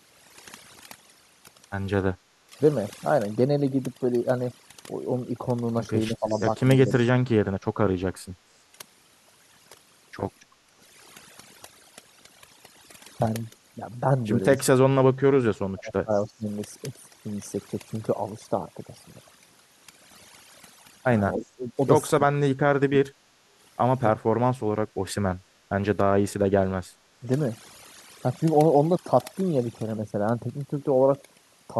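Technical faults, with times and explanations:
Throughout: overdone noise removal. A noise reducer set far too strong gates individual frequency bands, leaving a lowered background broken into twinkling specks.
2.47–2.57 s, 6.1–7.34 s, 14.73–16.47 s, 21.36–24.49 s, 26.98–27.28 s: speech suppressed in double talk. Likely an echo canceller confusing talker with far-end echo; speech dips by up to roughly 35 dB, affecting around 100 ms to 1.5 s in total per event.
6.3–6.9 s: echo leak. Likely residual loudspeaker pickup escaping cancellation; a faint delayed copy of the speech, about 25 dB down, trails by 291 ms.
8.36–8.53 s and 10.64–10.76 s: background gated by the echo canceller. The canceller clamps the microphone during playback, so room sound briefly drops by about 7 dB and 10 dB, then returns.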